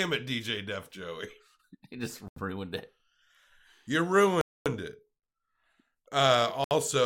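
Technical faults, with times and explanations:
2.28–2.36 s, 4.41–4.66 s and 6.64–6.71 s, Bluetooth stall: the speech cuts to dead silence for about 82 ms, 246 ms and 68 ms, then resumes abruptly. The likely cause is radio interference delaying packets until the headphones' buffer emptied and playback waited for retransmissions. On the waveform each gap is a flat line with hard edges. On a spectrogram each appears as a clean vertical blank band across all frequencies.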